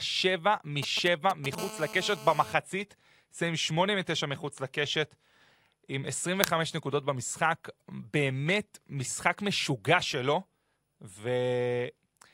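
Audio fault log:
0.83–1.55 s, GSM signalling bursts: a nearby 2G phone's brief radio bursts are rectified by the audio circuitry, giving galloping ticks and short 217 Hz buzzes, roughly 10 dB below the speech.
1.58–2.54 s, GSM phone buzz: continuous 217 Hz transmit bursts from a phone in a call are rectified into a hard, harmonic-rich rasp, about 14 dB below the speech.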